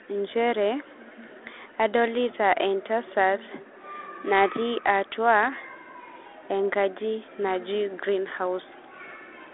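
Nothing goes wrong anywhere in this speech, which simply comes through as ordinary 32 kbit/s G.726 telephone audio, sitting in a narrow band of roughly 300 Hz to 3.5 kHz with nothing above about 3.8 kHz.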